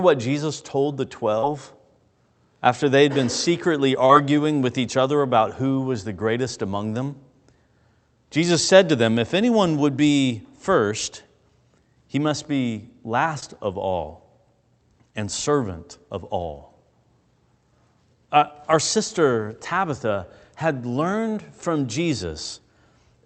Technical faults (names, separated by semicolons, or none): short concealed packet loss